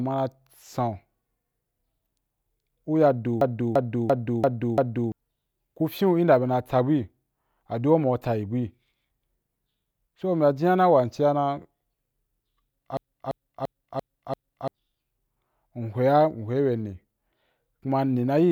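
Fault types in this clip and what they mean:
system hang loop: twice, a 0.34 s slice of speech stutters five times at 2.9 per second, as the sound hardware keeps cycling its ring buffer while the driver is frozen.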